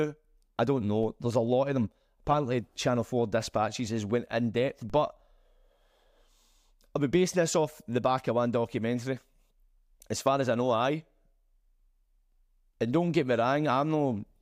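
At 1.03 s, just after "I don't", and again at 4.90 s, after "has went in depth", a DC step shifts the waveform's zero line by about -37 dBFS, heard as a brief low thump. The speech runs on uninterrupted, and the offset then drains away through a roughly 5 Hz high-pass, which marks it as a baseline jump rather than a dropout or clipping click.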